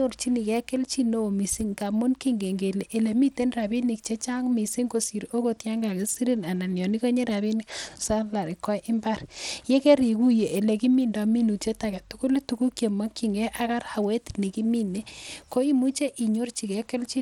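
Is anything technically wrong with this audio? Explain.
Yes. Throughout the speech there is Bluetooth SBC compression damage, likely from a starved bit pool consistent with roughly 96 kbps. The upper sub-bands get too few bits, so the treble flickers and drops out, while coarse quantisation leaves gritty noise and aliasing on the sound.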